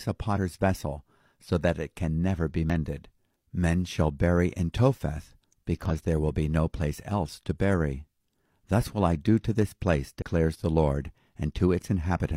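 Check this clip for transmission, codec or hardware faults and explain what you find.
The speech shows damaged data in a compressed stream four times: 0.33 to 0.38 s (before "vessel so that it"), 2.70 to 2.74 s (after "it can never be"), 5.86 to 5.92 s (before "there will be no"), and 10.17 to 10.22 s. The decoder misreads corrupted frames and loses sync, producing brief glitches that appear as broadband smears or waveform discontinuities.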